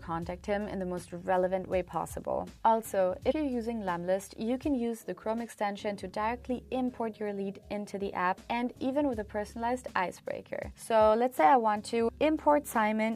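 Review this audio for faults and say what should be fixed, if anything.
Damaged data in a compressed stream at 3.30–3.32 s and 12.08 s: corrupted frames make the decoder lose sync and hunt for the next header, producing brief blips. Prevent this by storing and transmitting the stream with checksums or error protection, and re-fetching any frame that fails verification.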